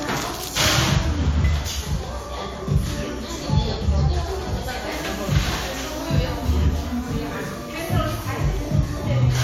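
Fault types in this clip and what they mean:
Nothing here to flag; the sound comes across without any technical trouble worth noting.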